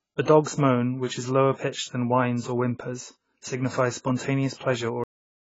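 From the first moment to the end, the speech carries heavy damage from AAC compression. Nothing is present above 7.6 kHz. The sound is dull and smeared. Sibilants turn fizzy, and sustained sounds warble. The likely cause is AAC-LC at a very low bitrate, which fits roughly 16 kbps. The encoder had too few bits for the spectrum. It dropped the top band.

At 5.04 s comes a cut-off end. The audio stops dead in the middle of a sound. It falls straight to digital silence with no decay. That silence runs for the final 0.53 s. The closing buffers were never written or played, so the remaining audio is missing. The sound does not fade or finish naturally. It simply vanishes.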